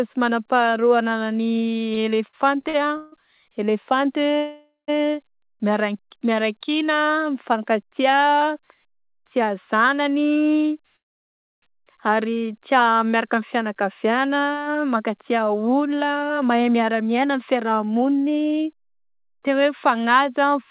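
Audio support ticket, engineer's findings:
Repeated stalls (stutter), 1.94–3.14 s. Seven short hitches, longest 150 ms, about 325 ms of held sound in total, nothing skipped. Jitter buffer repeatedly starved by late packets. Many brief stalls rather than one long hold, unlike a freeze.

Call audio freeze, 4.37–4.90 s. Sound held and fading for about half a second, silent for the last 170 ms, then resumes exactly where it stopped. Likely delayed packets emptying the jitter buffer. Inserted gap, not lost audio: no content skipped.

Call audio freeze, 10.96–11.64 s. 660 ms of silence, then playback continues from the same point with nothing missing. Likely a network hold-up draining the jitter buffer. One long hold, not the repeated short hitches of a stutter.

Jitter buffer slow-down, 12.17–12.98 s. Audio drawn out at about 87% speed, roughly 108 ms added, pitch unchanged. Receiver repeating pitch periods to rebuild its reserve. 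Continuous stretching with no gaps, unlike a stall.

Jitter buffer speed-up, 14.96–20.64 s. Hurried delivery at about 108% speed, roughly half a second cut, pitch unchanged. Buffer trimming pitch periods to shed excess delay. Pitch held steady, so not a resampling or clock-rate error. Narrowband call path, nothing above 4 kHz.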